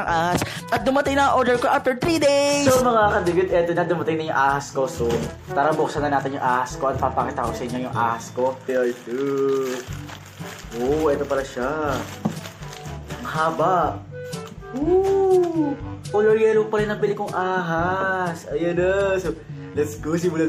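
From start to finish, the audio was likely squeezed through MP3 compression at a bitrate around 64 kbps, too few bits to cover the full spectrum. The encoder lets weak frequency lines flicker on and off between frames, giving a plainly audible watery, swirling texture with smeared attacks.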